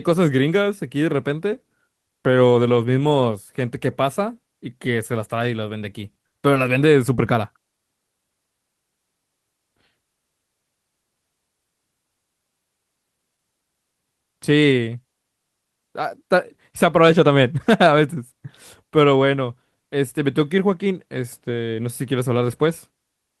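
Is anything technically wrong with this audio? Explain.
Yes. The speech has two kinds of network fault, clustered between about 6.1 and 7.7 seconds.

The first is a short stall from a late packet, from 6.11 to 6.20 s. A packet arrived late and the jitter buffer ran dry. The receiver held the last sound for about 40 ms while it waited. Nothing was lost. The playout delay grew by 40 ms, and about 15 ms was later trimmed to catch up. You hear a sound stretched slightly too long, with a slight buzz or dip.

Next comes short concealed packet loss, five times: 6.28 to 6.34 s, 6.54 to 6.58 s, 7.16 to 7.20 s, 7.56 to 7.60 s, and 7.70 to 7.74 s. Each time, 20 ms of audio never arrived. The receiver filled the gap by extending the previous sound, then blended back into the real signal. The first gap got 40 ms of fill and added a small delay. These come across as brief smears or wobbles in the speech.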